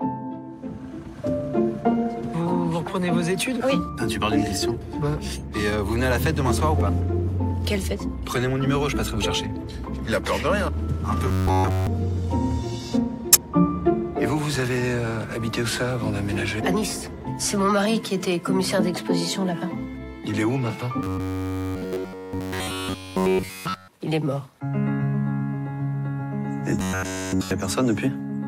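The audio has two kinds of fault. Corrupt frames decoded appear as short chirp-like bursts at 4.62 to 4.72 s (several frames, peaking at about -35 dBFS), at 13.33 to 13.35 s (a single, much louder blip at about -5 dBFS), and at 24.12 s (about -25 dBFS). They are brief bursts of energy at the wrong frequencies. Robotic sound from repeated short buffers is the opposite: a sustained metallic buzz locked at 93.8 Hz, at 11.28 to 11.87 s, 21.03 to 23.88 s and 26.79 to 27.51 s, with the real audio entirely replaced. That pitch is likely caused by a roughly 10.7 ms buffer being replayed over and over.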